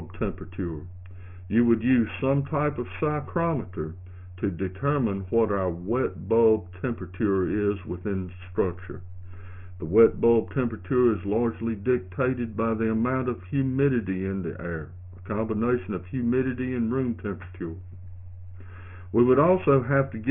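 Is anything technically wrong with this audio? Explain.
Yes. Aliasing runs through the whole clip. Content that originally extended well above 3 kHz has been folded back below that point, which fits a sample-rate reduction to about 6 kHz with no anti-alias filter beforehand. Energy above the 3 kHz limit mirrors down into spurious, inharmonic components sitting roughly 25 dB under the main signal. High-frequency detail comes out gritty and metallic, and the spectrum stops abruptly at the 3 kHz edge.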